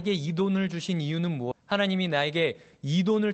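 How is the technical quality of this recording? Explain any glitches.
The recording has two glitches close together, both in the middle of the speech.

From 1.51 to 1.53 s the speech jumps forward with no gap, dropping roughly 0.7 s of what was being said and joining the two sides almost seamlessly. This is a skip ahead: that stretch of audio was dropped, either on the way or by the jitter buffer when it overflowed, while later audio was already waiting.

From 1.61 to 2.55 s the speech runs about 6% fast at unchanged pitch, sounding slightly hurried. This is jitter buffer speed-up: the buffer was still holding more audio than it wanted, so it repeatedly removed short pitch-period slices, several tens of milliseconds in total, to shrink the delay.

The audio went through an Opus call path, and its dull, narrowed top end points to speech coded at a low bitrate with a roughly 8 kHz bandwidth.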